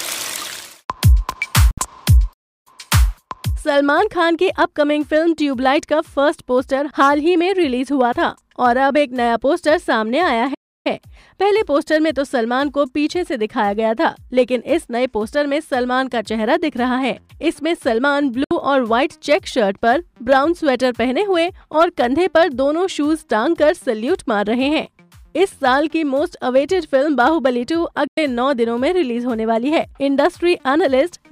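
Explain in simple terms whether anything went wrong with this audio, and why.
Digital broadcast dropouts at 1.71, 18.44 and 28.07 s: the sound snaps to silence for about 64, 64 and 96 ms, which fits a receiver muting over a few bad frames before reception recovers. Playback stalls at 2.33 and 10.54 s: the sound freezes into silence for about a third of a second, likely because the player briefly ran out of data, then resumes.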